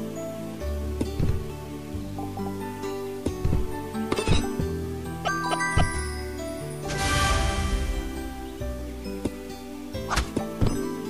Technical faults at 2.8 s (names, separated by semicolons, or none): low bit depth without dither